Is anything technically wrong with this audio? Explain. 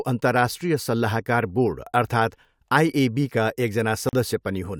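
Yes, one fault. At 4.09 s there's a block of digital silence: about 40 ms of the audio cut to silence, likely because the output buffer wasn't filled in time. The abrupt cut and return leave a short hole.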